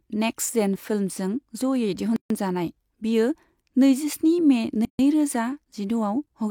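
Gaps at a join of encoded pieces cut into this speech clip at 2.16 to 2.30 s and again at 4.85 to 4.99 s, each a silence of about 140 ms. The pieces were encoded separately and joined untrimmed, so encoder start-up delay and last-frame padding remain as a dead hole with smeared edges, after which the speech resumes where it stopped.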